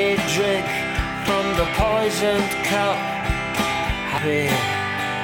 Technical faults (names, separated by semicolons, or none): dropped buffer (overrun)